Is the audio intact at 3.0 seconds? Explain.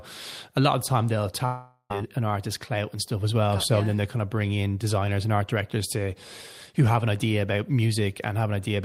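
Yes, the audio is intact at 3.0 seconds, with no fault audible at that moment.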